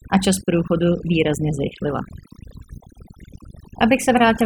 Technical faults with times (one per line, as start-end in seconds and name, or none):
0.00-4.46 overdone noise removal